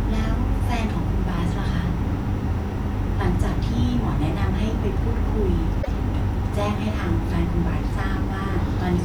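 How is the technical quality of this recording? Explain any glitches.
The recording has one audible glitch. At 5.81 s the speech jumps ahead and about 0.07 s of garbled sound follows, ending by 5.88 s. This is likely a broken MP3 bit reservoir: after frames were lost, the next 26.1 ms frames decoded borrowed data from the wrong frame.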